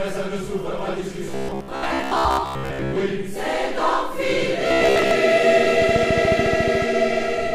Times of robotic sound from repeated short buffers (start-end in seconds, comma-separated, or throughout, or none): 1.26-2.97, 4.68-5.11